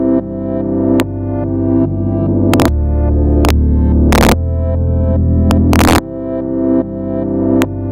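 Integer overflow cracks at 1.0 s, 2.54–2.66 s, 3.45–3.50 s, 4.13–4.32 s (about 4 dB over), 5.51–5.98 s and 7.62 s: peaks exceeding full scale wrap to the opposite sign. The waveform shows sudden rail-to-rail flips, and the spectrogram shows bright broadband vertical streaks.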